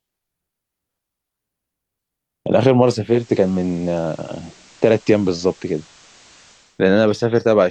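At 2.94 s the receiver lost the digital stream and made a digital radio blending to analogue, cross-fading over about 377 ms to FM until 6.85 s. On FM, the sound gains a hiss about 30 dB below it.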